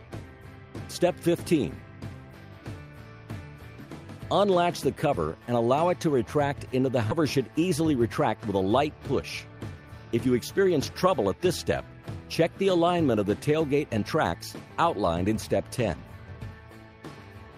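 At 7.11 s the audio makes a skip ahead: about a second of material is missing, and the two sides are joined directly with no silence or fill between them. That lack of any gap separates it from a dropout, where the missing stretch would be heard as a hole.

Right after, from 7.21 to 8.5 s, a jitter buffer speed-up runs the audio at 108% speed, and again from 9.12 to 10.26 s at 109%. Each time the receiver trims short pitch-period pieces to remove roughly a tenth of a second of backlog. The sound is hurried, but the pitch stays put, unlike a resampling error that would raise it.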